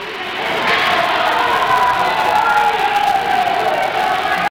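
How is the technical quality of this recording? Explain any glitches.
The recording has one fault, a filter restarted on every block, present throughout. A filter loses its stored state at each block boundary and starts from silence. Each block opens with a small transient. At 200 Hz, that means blocks about 5 ms long. It sounds like a steady buzz that rises and falls with the sound's level.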